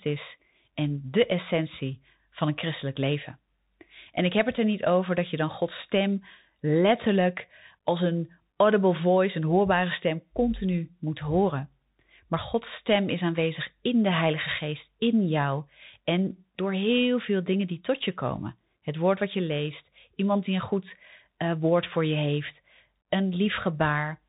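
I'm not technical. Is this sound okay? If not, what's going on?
No. From start to finish, the speech sounds muffled and boxy, like a phone call. S sounds come out scratchy, louder high sounds break up, and a grainy hiss sits underneath, all plainly audible. This is the Bluetooth CVSD headset codec, the basic format many wireless headsets use for calls. It records sound as a rapid stream of tiny up-or-down steps, which can't keep pace with sharp sounds, and it drops everything above about 3.8 kHz.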